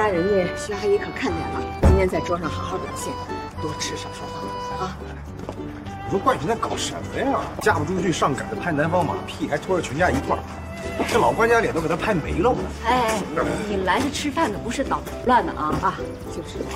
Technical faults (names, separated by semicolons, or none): damaged data in a compressed stream